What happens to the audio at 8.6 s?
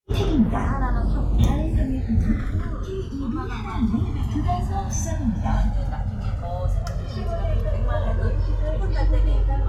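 Channels drifting apart is what is audible at 8.6 s, as it is across the whole clip. The left and right channels appear to run on separate clocks that disagree by something like 200 parts per million, so the gap between them keeps widening and reaches roughly 2 ms near the end. When the two channels are combined, that sliding offset moves a set of comb-filter notches slowly through the spectrum, and the sound takes on a gradual, sweeping flanging colour.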